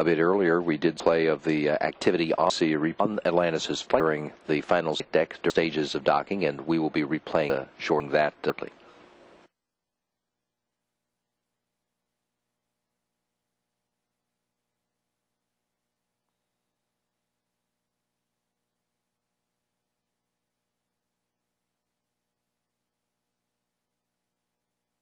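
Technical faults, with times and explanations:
1.0–3.0 s, 4.0–5.5 s, 7.5–8.5 s and 20.0–21.0 s: chunks out of order. In each span, a 500 ms block of audio plays late, after blocks meant to follow it. It lands three blocks late in the first span, two in the second, and one in the last two. No audio is missing, only misplaced. Each displaced block makes three abrupt joins, and the sound briefly jumbles.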